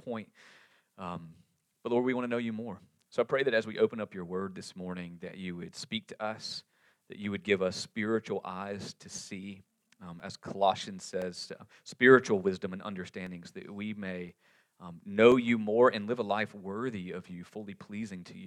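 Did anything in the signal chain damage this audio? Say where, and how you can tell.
Yes, at the driver or USB transport stage. From 9.18 s to 15.32 s there are periodic USB or driver dropouts: about seven short ticks spaced exactly 1.024 s apart, each a gap of a couple of milliseconds filled with silence. The strict regularity points to a background task repeatedly stalling the bus or audio driver, so the buffer briefly runs dry and those samples are lost. The ticks stand out only because signal is present.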